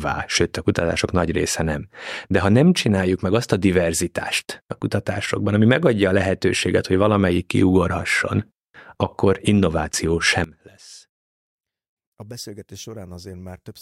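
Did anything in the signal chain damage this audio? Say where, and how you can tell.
Yes. From 10.44 s, right after "akkor innováció", to the end of the clip at 13.81 s, the speech drops by about 19 dB. What remains is a faint copy. That points to one channel inverted, likely from a polarity swap in the analogue wiring or a mixing stage. When the two channels are summed to mono, their shared content cancels. Only their small differences survive.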